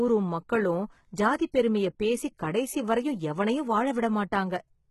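HE-AAC compression, likely, runs through the whole clip. The speech has a bright but synthetic top end, and nothing reaches past 11.8 kHz. Only the lower band appears to be properly coded. The treble sounds rebuilt by copying lower bands upward, so harmonics above the crossover fail to line up. Sibilants come out gritty and lispy, and the damage is heavy enough to fit a very low bitrate around 16 kbps.

Pre-echo occurs at 1.52 s. A brief hiss of about 17 ms is heard just ahead of a sharp attack. The codec spreads quantisation noise evenly across a transform block. Here the attack sits late in its block, so the noise meant to hide under the loud onset also fills the quiet stretch before it. The onset sounds softened and smeared rather than crisp.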